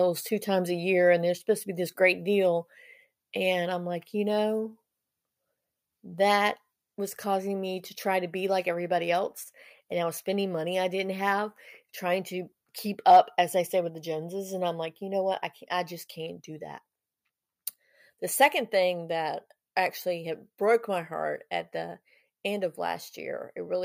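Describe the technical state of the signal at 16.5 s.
At 16.5 s the speech signal is intact, with no dropout, clipping, glitch or other technical fault.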